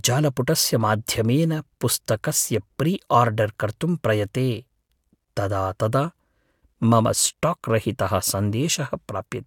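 Nothing goes wrong anywhere in this stretch of speech, so there's no technical fault to point to at any moment.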